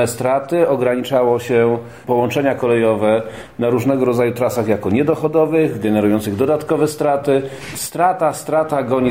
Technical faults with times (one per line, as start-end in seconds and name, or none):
none